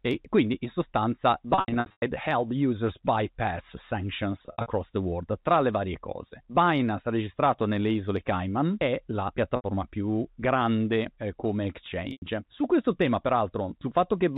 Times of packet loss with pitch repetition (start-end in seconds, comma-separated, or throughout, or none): 1.54-2.02, 4.46-4.66, 9.56-9.64, 12.12-12.22